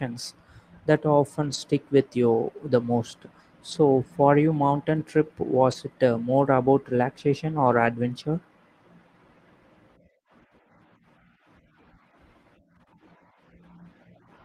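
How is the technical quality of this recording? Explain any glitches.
Four short glitches interrupt the speech, all of the same kind: a lost packet rebuilt from error correction, at 1.41–1.55 s, 3.71–3.77 s, 5.71–5.73 s and 7.67–7.85 s. Packets went missing in transit, and the decoder filled each gap with the low-bitrate backup copy carried inside the next packet. Nothing drops out, but those moments turn briefly rough and grainy.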